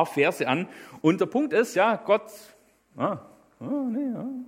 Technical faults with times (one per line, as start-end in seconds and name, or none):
none